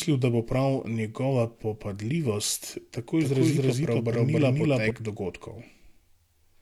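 A doubled audio track runs from 3.21 to 4.91 s, right after "prav njegova popadljivost tako": a second, equally loud copy of the speech trails about a third of a second behind, dry and full-band, switching on and off abruptly, likely from a slower second capture path.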